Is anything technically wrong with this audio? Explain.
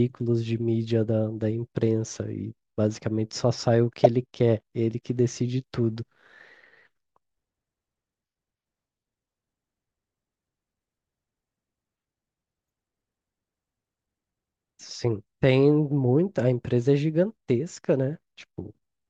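Yes, there's one glitch: a corrupt frame decoded at about 4.04 to 4.06 s in this speech clip. What happened is that a single compressed frame had some of its bits flipped, and the decoder went ahead and played it. The garbled gains and codes threw energy into the wrong frequencies for roughly that one frame's duration, so you get a short, loud chirpy burst of noise, peaking around -5 dBFS, that doesn't belong to the speech around it.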